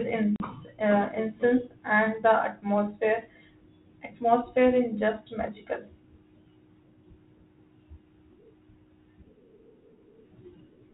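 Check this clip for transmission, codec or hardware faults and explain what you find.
One transmission fault is present in this speech, carried over G.726 ADPCM at 32 kbit/s with nothing above 4 kHz. From 0.36 to 0.46 s, a sharp 40 ms gap is followed by slightly distorted speech: packet loss on an ADPCM call, roughly two packets. The lost packets desynchronised the decoder's predictor and step size until they re-adapted.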